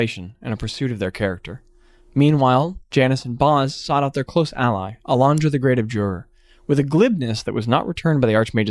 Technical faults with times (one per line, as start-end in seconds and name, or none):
none